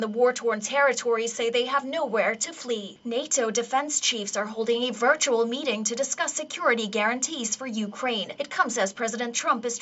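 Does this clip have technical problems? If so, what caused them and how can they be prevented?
No, no technical faults here.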